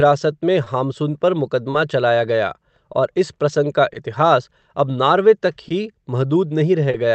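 All through this speech there is an uneven unsteadiness, with small timing hiccups at irregular points, as if the flow briefly catches and recovers. This is clock drift between sender and receiver. The sender's audio clock runs about two percent slow, so the receiver's jitter buffer keeps draining. To keep going, it repeats short pieces of audio.

There are also five short stalls from a late packet, at 0.64, 2.92, 4.61, 5.68 and 6.91 s. Each is a sound held about 20 ms too long, with a slight buzz or dip, after which the speech picks up where it left off with nothing lost. The one at 2.92 s falls between "चलाया गया" and "और इस प्रसंग का", and the one at 4.61 s between "इस प्रसंग का इतिहास" and "अब नार्वे". In each case the next packet hadn't arrived, so the receiver stretched the last sound until it did. The call path itself fits Opus at around 32 kbps, with the top end stopping near 8 kHz.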